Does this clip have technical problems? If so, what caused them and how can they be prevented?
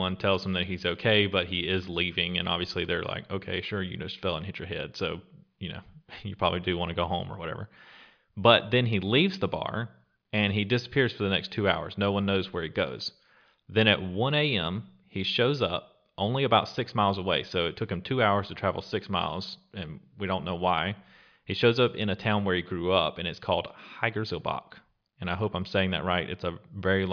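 No, the clip has no technical problems. There is nothing here to trace to a cause or to prevent.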